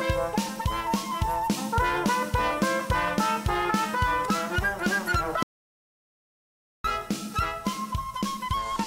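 At 5.43 s the sound cuts off into silence, with no room tone, until 6.84 s: an audio dropout to silence, likely from lost input, losing about 1.4 s.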